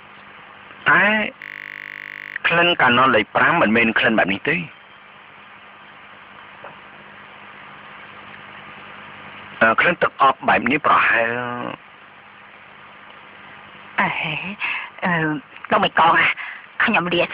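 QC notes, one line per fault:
1.42–2.36 s system hang loop: one 20 ms slice repeats exactly 47 times as playback cycles a frozen buffer, a steady 50 Hz buzz rather than a dropout's silence.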